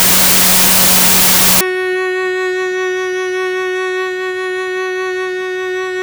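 From 0.0 to 1.61 s the music suffers a wrong sample width fault. Data written as 32-bit integers are read as 16-bit. Each sample splits into two values, one carrying the real top bits, one junk. Loud noise buries the music, which plays at half speed, an octave low.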